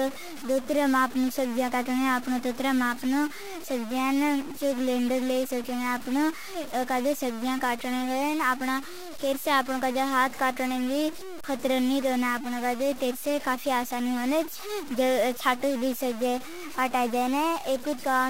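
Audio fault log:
throughout stuck bit: One data bit has likely latched in the converter or a broken line, so about half the samples shift by a step of about -35 dBFS, in a pattern set by the waveform. This gives the speech harsh, buzzy distortion and fills pauses with steady noise.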